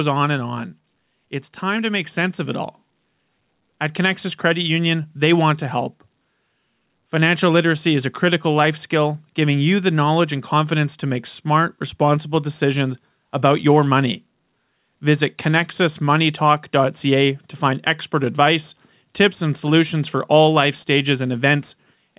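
A speech recording carries an automatic gain rising fault. From 1.19 s to 11.34 s the level climbs slowly by about 6 dB. Voice and background noise swell together. The gain control judged the input too quiet and kept raising it. The band stops at 4 kHz, which fits a G.711 A-law call path at 64 kbps.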